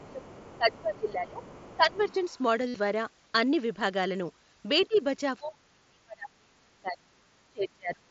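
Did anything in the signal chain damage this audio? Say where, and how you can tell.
Yes. The call processing shows speech suppressed in double talk at 0.0 to 1.43 s, 1.75 to 2.21 s, 4.88 to 5.0 s and 5.39 to 8.06 s. The level sags by about 20 dB, and by as much as about 35 dB in the last stretch. The likely cause is an echo canceller that could not separate the talker from the far-end echo and so attenuated everything. On a waveform the envelope collapses in those spans. On a spectrogram the upper harmonics thin out.

The same stage lets the other side's voice leak through from 0.04 to 2.39 s and again from 4.8 to 4.98 s. A second, fainter voice sits about 25 dB below the main speech, most likely loudspeaker echo that the canceller did not fully subtract. On a spectrogram it appears as a separate set of weak harmonic traces that do not line up with the main talker's pitch.

The Bluetooth link has concealed headset packet loss from 2.68 to 2.75 s, about 67.5 ms. 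That length fits roughly nine lost frames. The receiver filled the gap by repeating recent waveform, so the sound becomes a steady buzzy tone at full level with a slight warble where real audio resumes. The waveform shows near-identical periodic cycles there. The spectrogram shows flat, unchanging harmonic bands inside the mSBC codec's 8 kHz ceiling.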